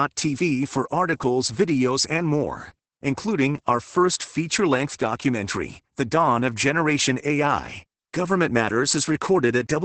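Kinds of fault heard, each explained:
Opus voice compression: throughout, the speech is cut off above about 8.7 kHz and carries a hoarse, slightly robotic grain from coarse SILK excitation coding, which fits a rate near 10 kbps. A plain low-pass filter would only dull the sound, not roughen its texture.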